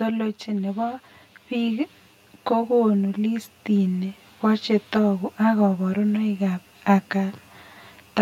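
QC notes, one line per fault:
throughout: channel delay (comb filtering). One channel lags the other by around 10 ms, and the mono sum cancels at evenly spaced frequencies starting near 50 Hz, giving a fixed hollow, phasey colour. Unlike a reverberant room, the notches never move or decay.
0.45–4.26 s: automatic gain rising. The automatic gain control judged the input too quiet and lifted its gain by about 6 dB over nearly four seconds. Speech and background noise swell together, which separates it from someone simply speaking louder.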